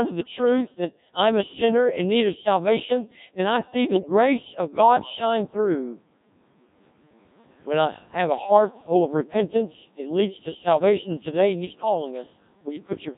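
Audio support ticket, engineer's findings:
Robotic, buzzy speech throughout the clip. Codec 2 vocoder, heavy damage, consistent with 1.3 kbit/s mode. Only pitch, voicing, energy and spectral envelope are transmitted; the decoder rebuilds the speech from sine waves, so the original waveform is lost. Room noise, a normal part of the recording, rises by about 12 dB near 5 s and stays about 29 dB below the speech.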